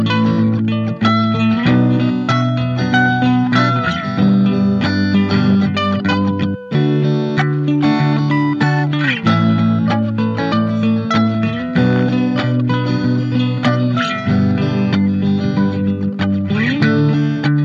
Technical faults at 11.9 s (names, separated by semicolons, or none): none